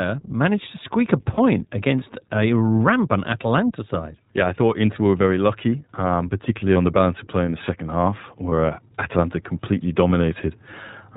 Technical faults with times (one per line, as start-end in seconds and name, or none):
0.00-11.16 iLBC codec
1.34-1.40 lost iLBC frames
6.74-6.76 lost iLBC frames
8.50-8.53 lost iLBC frames
10.08-10.10 lost iLBC frames